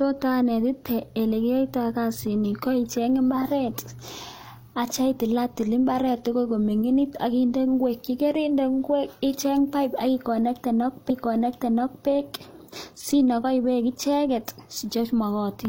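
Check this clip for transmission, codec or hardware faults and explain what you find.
One transmission fault is present: a stream segment repeated. From 11.06 s to 12.03 s, just under a second of the speech plays a second time, adding 975 ms to the programme. The player received or queued the same chunk of the stream twice and played both copies back to back, so a small blip marks the jump back before the passage runs again. Unlike an echo or a looping buffer stutter, the repeated stretch is a full, clean copy heard once, and the speech then moves on normally.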